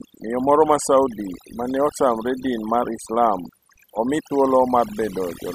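Overdone noise removal runs through the whole speech clip. A noise reduction stage was pushed too hard on a noisy recording. It treats any frequency band sitting near its noise estimate as noise and cuts it deeply or entirely. Quieter parts of the voice fall below that line and get removed too. Between phrases the background drops to near silence, dotted with twinkling specks.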